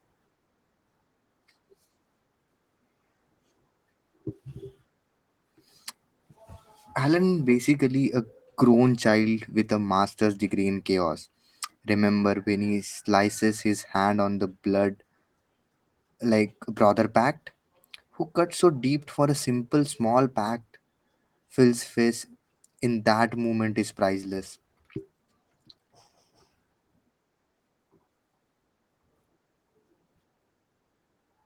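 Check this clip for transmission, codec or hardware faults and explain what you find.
No transmission, codec or hardware faults.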